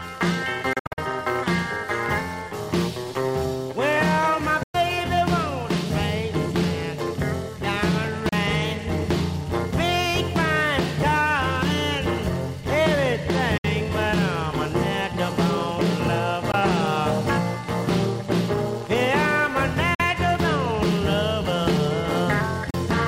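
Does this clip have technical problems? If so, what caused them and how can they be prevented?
Yes. Seven short silences interrupt the sound: a cluster of gaps from 0.73 to 0.99 s (about 183 ms missing in total, longest run 61 ms), then 4.63–4.77 s, 8.29–8.33 s, 13.58–13.65 s, 16.52 s, 19.94–20.01 s and 22.70–22.75 s. These are most likely a Bluetooth dropout. Packets arrived too late and were discarded, so playback went silent and then resumed further along, as if it had kept playing. Gap lengths in multiples of about 15 ms fit lost packets. On a waveform each appears as a flat-line hole. A spectrogram shows blank vertical stripes across all frequencies. Keeping the headphones close to the source, with a clear line of sight and away from crowded 2.4 GHz interference, prevents this.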